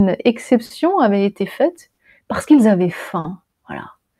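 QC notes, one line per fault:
throughout: clock drift between sender and receiver. The sender's clock runs a few percent slow, around 4 percent. The jitter buffer therefore keeps draining. To keep playing, the receiver repeats short pieces of audio. The result is small timing hiccups at uneven intervals across all 4 seconds. The pacing sounds slightly lumpy and never settles into a steady flow.
0.65–0.72 s, 1.92–1.99 s, 3.19–3.26 s: short stall from a late packet. The first comes just before "avait été faite parce". The second falls between "avait été faite" and "parce qu'ils avaient". The third follows "faite parce qu'ils avaient". Each time a packet misses its slot and the buffer empties. The receiver holds the last sound for about 50 ms, with a slight buzz or dip, then resumes where it stopped. Nothing is lost, but playback ends up 50 ms later each time.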